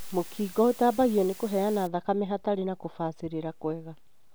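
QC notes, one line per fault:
0.00–1.87 s, low bit depth with dither: a constant, even hiss sits about 20 dB below the speech, with no audible distortion, consistent with roughly 6-bit resolution. Dither randomises the rounding error into steady white noise. It clears just before "thakame hatarĩ na".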